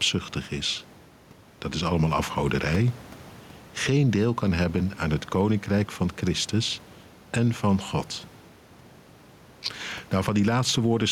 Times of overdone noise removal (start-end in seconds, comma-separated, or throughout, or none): none